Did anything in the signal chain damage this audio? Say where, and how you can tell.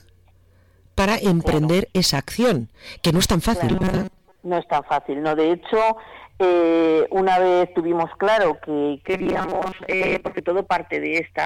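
Yes. From 3.70 to 4.36 s and 9.06 to 10.40 s the sound becomes a rigid metallic buzz at 188 Hz. This is robotic sound from repeated short buffers, likely a buffer underrun replaying a 5.3 ms chunk through most of the first stretch and about half the second.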